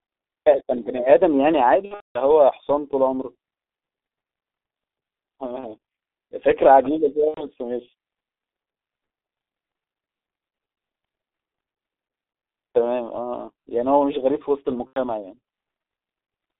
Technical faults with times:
0.00-16.59 G.723.1 codec
1.85-2.19 VoIP packet loss concealed by the speech codec
5.61-5.68 VoIP packet loss concealed by the speech codec
7.28-7.44 VoIP packet loss concealed by the speech codec
14.87-14.99 VoIP packet loss concealed by the speech codec

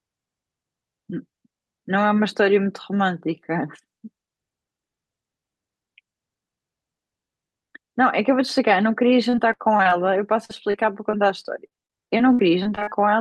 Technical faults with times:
9.29-9.93 repeated packet loss (robotic sound)
10.45-11.15 repeated packet loss (robotic sound)
11.67-12.93 repeated packet loss (robotic sound)

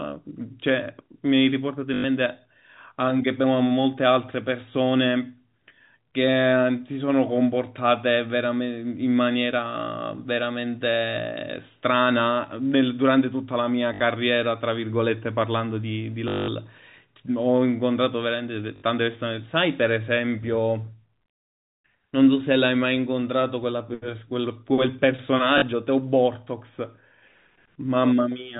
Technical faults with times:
1.94-2.04 packet loss with last packet repeated
13.94-14.00 packet loss with last packet repeated
16.28-16.48 packet loss with last packet repeated
18.76-18.82 packet loss with last packet repeated
25.58-25.62 packet loss with last packet repeated

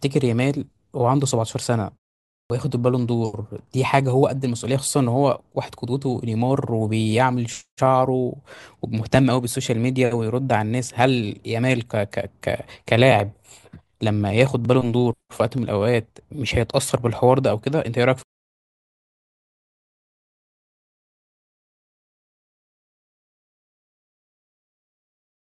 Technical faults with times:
2.44-2.50 clipped start after a pause

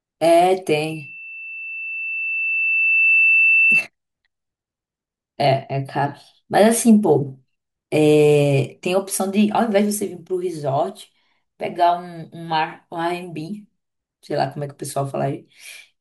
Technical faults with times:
0.86-3.87 loudspeaker feedback squeal

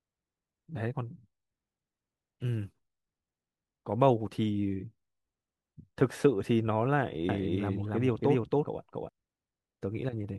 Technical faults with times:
7.29-9.09 doubled audio track

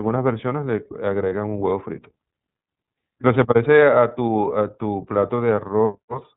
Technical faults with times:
0.00-6.36 iLBC codec
1.29-1.32 lost iLBC frames

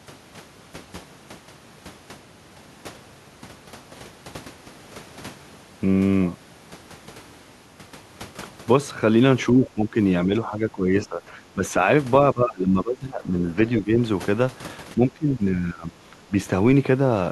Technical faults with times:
9.52-9.97 speech suppressed in double talk
10.26-11.74 speech suppressed in double talk
12.33-13.92 speech suppressed in double talk
14.94-16.33 speech suppressed in double talk

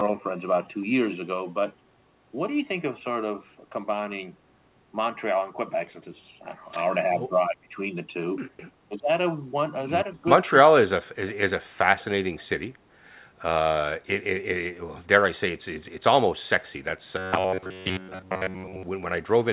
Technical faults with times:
4.78-6.28 robotic sound from repeated short buffers
7.17-7.76 speech suppressed in double talk
8.78-9.10 speech suppressed in double talk
9.91-10.27 robotic sound from repeated short buffers
12.37-12.44 echo leak
17.18-18.83 robotic sound from repeated short buffers

